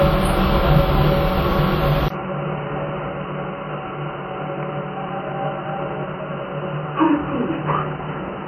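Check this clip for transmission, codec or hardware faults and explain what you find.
Two faults here, one throughout and one from about 2.08 s to the end.

The whole clip carries plainly audible transform-codec damage, most likely WMA compression, and the character fits something around 48 kbps. With long blocks, quantisation noise smears over tens of milliseconds around transients, and weaker spectral detail gets zeroed out. So you hear a ringing, washy quality with a hiss that swells and fades along with the sound. Bandwidth stays wide, reaching about 20.1 kHz, so this is texture damage rather than dullness.

At 2.08 s there's a 20 ms dropout, and then everything changes character until the end. That looks like an input switched to a poorer device, likely a different mic or a headset falling back to its call profile. The new path passes nothing above 3 kHz, so the sound goes dull and boxy. 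The level drops by roughly 10 dB, and a fresh noise floor sits around 30 dB under the signal.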